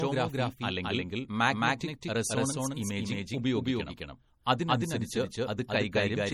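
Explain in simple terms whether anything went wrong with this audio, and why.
Two things went wrong, and both last through the whole clip.

The speech has most likely been captured twice, with the second copy arriving late, which gives a doubled audio track. A second copy trails about a fifth of a second behind and is just as loud, so every syllable sounds repeated, with no room echo to soften it.

The speech also appears to have been compressed heavily into a small MP3 and later saved again as a much larger one. This is low-bitrate audio saved at a high bitrate. The bigger file cannot restore what the first squeeze removed, so the damage from that first squeeze remains throughout.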